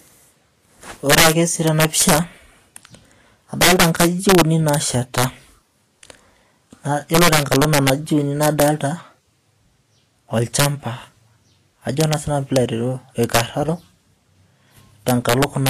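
Speech recording with two faults running throughout. Integer overflow: loud peaks, driven about 9 dB past full scale, wrap to the opposite sign instead of flattening. Under one percent of samples are affected, but each one snaps across the whole range, producing violent cracks far sharper than the dull buzz of clipping. Vorbis compression is the likely cause of the grainy, hissy texture, roughened tones and smeared onsets. There is nothing above 14.1 kHz, which fits a bitrate near 39 kbps. Unlike steady background hiss, this graininess rises and falls with the sound itself.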